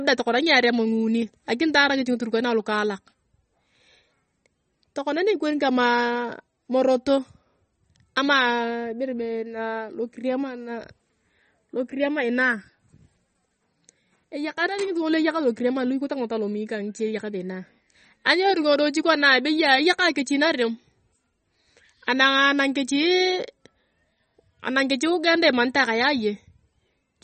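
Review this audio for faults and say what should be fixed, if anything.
MP3 compression throughout: the treble stops sharply at 8.4 kHz and weak detail flickers, giving watery, swirly speech that fits a bitrate near 33 kbps, likely from MP3 encoding. Prevent it by recording losslessly or encoding at a much higher bitrate.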